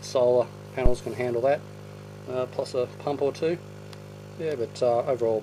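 A supply, most likely phantom power, was switched on or off on the live input at 0.86 s, and the voltage step passed through the coupling capacitors as a phantom power thump: a deep, low-frequency knock lasting until 0.97 s, dying away with a decay of about 26 ms.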